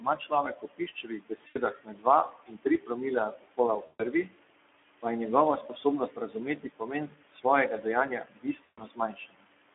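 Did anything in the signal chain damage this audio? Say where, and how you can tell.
Yes. Noise suppressor artifacts run throughout, from the call-processing stage. The room noise, sitting about 13 dB below the speech, is pulled down by about 20 dB between phrases and swells back under them.

The Speex codec damage is plainly audible across the whole clip. The band stops at 250 Hz and 3.4 kHz, and the speech is hoarse and noisy because too few bits carry the excitation. That sound fits a lowish Speex setting near 11 kbps.

Speech cut by the noise suppressor occurs at 0.00–2.92 s, 3.28–4.59 s, 5.62–7.45 s and 8.20–9.54 s. Here the suppressor mistook quiet speech for noise. Soft consonants and word endings drop by about 21–22 dB and sound swallowed, affecting the most speech in the first three seconds.

VoIP packet loss concealed by the speech codec appears as network gaps at 1.47–1.59 s (80 ms), 3.85–4.02 s (140 ms) and 8.63–8.82 s (140 ms). 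The decoder repeats its last pitch and filter with falling gain, so each gap becomes a fading buzzy or noisy smear. The voice stays weak for a moment after each gap.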